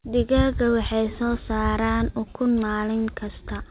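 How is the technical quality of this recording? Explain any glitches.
No glitches can be heard anywhere in the recording. The speech has come through a WebRTC call path that leaves nothing above 4 kHz, giving it the narrow, telephone-like sound that fits G.711 A-law coding.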